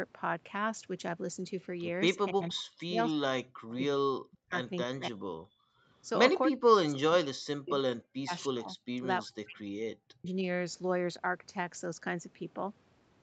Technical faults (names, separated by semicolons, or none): speech suppressed in double talk; background gated by the echo canceller